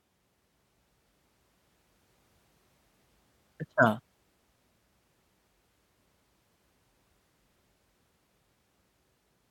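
Nothing in this recording stands out as a technical fault; the speech just carries on without any glitch, dropout or distortion catching the ear along the way.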